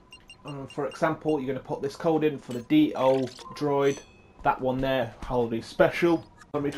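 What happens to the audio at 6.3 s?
A drift correction step, likely clock-matching software slowing playback by 5.4%, drops speed and pitch together by about 95 cents from 5.02 s to the end.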